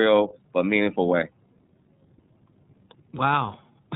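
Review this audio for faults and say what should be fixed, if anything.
The whole clip has gone through the iLBC codec, and it's plainly audible. Nothing gets past about 3.8 kHz, so the speech sounds boxed-in and dull, and there's a rough, slightly synthetic grain on top. iLBC codes each frame's excitation on its own without borrowing from the previous frame, and the texture here points to the 13.33 kbps mode with 30 ms frames. To avoid it, record or route the call through a wideband codec instead of a narrowband VoIP leg.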